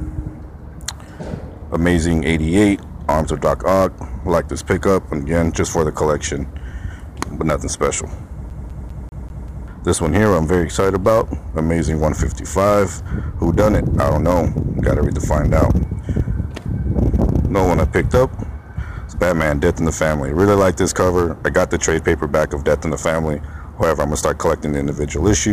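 From 8.50 to 9.68 s the CD is stuck on one turn: a 196 ms slice repeats six times with tiny mutes, showing as identical blocks separated by brief gaps in the waveform.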